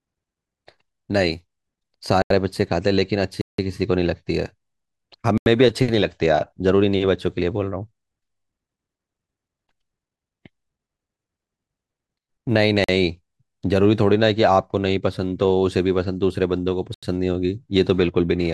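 Blocks of digital silence interrupt this speech clip at 2.22, 3.41, 5.38, 12.84 and 16.94 s, lasting about 45 to 171 ms. The output drops abruptly to silence and back. The 85 and 171 ms holes fit missed 4096- and 8192-sample buffers.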